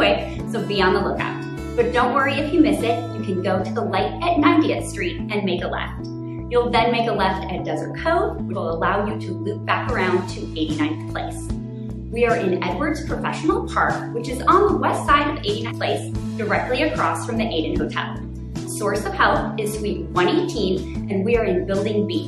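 At 8.52–8.56 s and 15.68–15.72 s, compressed frames are skipped. The audio jumps ahead roughly 100 ms, then 150 ms.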